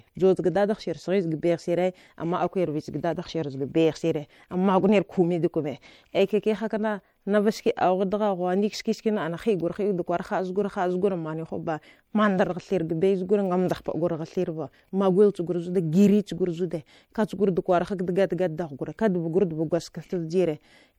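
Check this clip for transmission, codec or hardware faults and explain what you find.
One fault runs through the whole clip: MP3 compression, likely at a bitrate that fits about 64 kbps. Short of bits, the encoder cuts the treble and drops weak frequency lines frame by frame, leaving the speech watery and swirly, with metallic chirps on s sounds.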